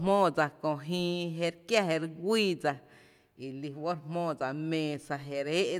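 Speech recording with no technical faults detected anywhere in the clip.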